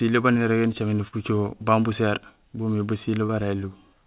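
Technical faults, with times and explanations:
1.08–1.14 s and 3.26–3.31 s, short concealed packet loss: about 40 ms, then 20 ms, never arrived, so the decoder stretched the preceding sound across each gap, leaving brief smears.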